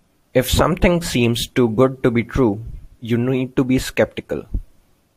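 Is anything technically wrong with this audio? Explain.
No, nothing technically wrong can be heard in this speech recording. Listening through the whole clip turns up no technical faults.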